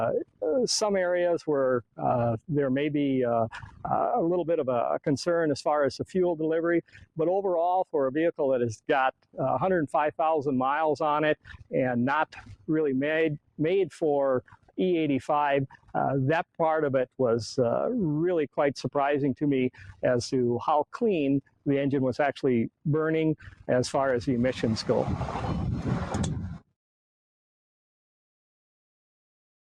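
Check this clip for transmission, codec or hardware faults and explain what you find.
Two related faults show up, both from processing rather than transmission or hardware.

Throughout, the level pumps and thins by roughly ten decibels. This is a noise suppressor applied to music or sounds, a speech-tuned suppressor treating steady tone and ambience as noise.

Sound is cut by the noise suppressor at 0.24–0.43, 1.83–2.5, 3.55–3.87, 6.03–10.19, 11.35–17.2, 19.7–21.67, 22.69–23.69 and 26.52–26.73 s. Held or decaying sound sinks by about 21 dB, or about 14 dB at 3.55 s, as the suppressor clamps it while attacks pass.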